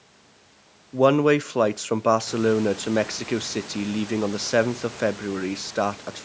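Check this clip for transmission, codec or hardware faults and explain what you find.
Nothing in this clip points to a system fault.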